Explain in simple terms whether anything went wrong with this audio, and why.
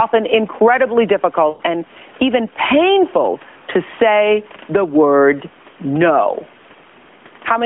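Around 1.50 to 1.62 seconds, just before "and even painful to", the speech briefly smears and fades. For about a tenth of a second the sound stretches out and sinks toward silence, then picks up a little weak and rough. These are lost AMR speech frames. A burst of radio errors ruined a short run of the phone call's data, likely about five frames. The decoder filled the gap by repeating its last good sound and turning it down.

Throughout the clip, quiet and loud moments end up squeezed close together, giving a flattened, boxed-in feel on top of the narrow phone-line sound. This is gain pumping. The likely cause is a microphone level set far too high, with an automatic limiter yanking the volume down on each loud sound and letting it creep back up in the gaps.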